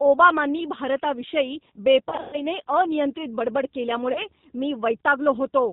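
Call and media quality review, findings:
G.729 codec, whole clip: rough, slightly synthetic speech with plainly audible coding damage and nothing above 4 kHz. The 8 kbit/s codec rebuilds each 10 ms frame from a vocal tract filter, pitch predictor and a few pulses. Spectrogram: hard ceiling at 4 kHz, smeared harmonics, grainy fill between formants.

VoIP packet loss concealed by the speech codec, 2.09–2.42 s: speech stretched into a fading buzzy tone or coloured noise, then weak, distorted recovery. 180 ms lost, scattered over 240 ms, longest gap 120 ms. The decoder repeated its last pitch and filter at falling gain. Waveform: decaying envelope.

Same fault, 4.12–4.26 s: shorter concealment, 30 ms lost. Spectrogram: brief flat smear, then muted onset afterwards.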